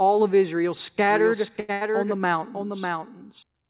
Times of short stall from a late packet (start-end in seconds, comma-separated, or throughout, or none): 1.60-1.71